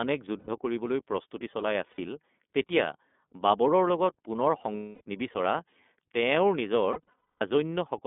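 The whole clip runs through the iLBC codec, squeezed into a phone-style band of roughly 200 Hz to 3.5 kHz, so there's no air or sparkle up top. The codec damage is plainly audible: the speech stays intelligible but has that slightly rough, synthetic edge, which fits iLBC's 30 ms, 13.33 kbps mode, coding each frame's excitation on its own.

Then there are four spots of lost iLBC frames, where packets went missing and the decoder filled the gap by looping the last pitch cycle with some noise mixed in. First, from 0.39 to 0.49 s, about 90 ms gets papered over. Then 1.91 to 2.00 s, about 60 ms. At 4.77 to 5.02 s it's a longer 240 ms stretch, long enough that the held buzzy vowel starts fading. The worst is 6.92 to 7.42 s, with 360 ms lost in bursts scattered over nearly half a second, the longest run around a fifth of a second, giving a stuttery, breathy smear. Each time the voice snaps back cleanly right after, because the frames don't depend on each other.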